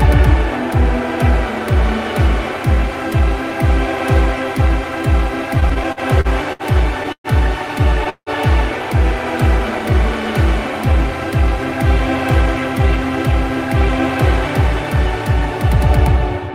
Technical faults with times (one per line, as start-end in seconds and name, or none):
5.55-7.27 repeated stalls (stutter)
8.09-8.30 call audio freeze
14.96-16.50 jitter buffer speed-up